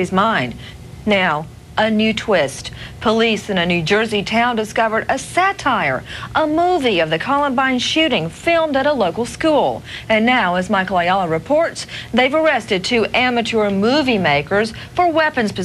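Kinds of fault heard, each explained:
No technical faults can be heard anywhere in the audio; the signal stays continuous and undisturbed throughout.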